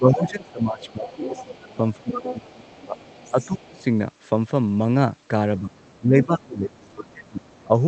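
From the start to about 3.8 s, the speech keeps ducking by as much as 20 dB, which is speech suppressed in double talk. The echo canceller likely couldn't tell the talker from the far-end echo and pulled both down. From 0.13 s to 3.84 s, the other side's voice leaks through faintly, about 15 dB below the speech, likely as the echo wasn't fully removed.

The same double-talk suppression returns from 5.6 s to the end, with dips of about 20 dB. From 5.73 s the leaked far-end voice is back too, but very faint at about 35 dB down, likely leftover echo.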